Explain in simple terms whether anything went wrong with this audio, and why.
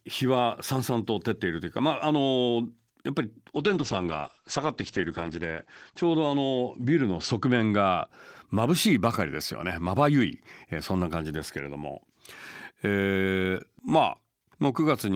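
Something did go wrong, from 3.54 to 8.13 seconds. This is a call bitrate drop. The call decided the connection had become weaker, so it squeezed the speech into far less data. With so little to work with, the sound gets coarse and rough, and the crisp top end above about 8 kHz is cut away. The voice turns muffled and watery. It is at its worst for about two seconds, then clears up again.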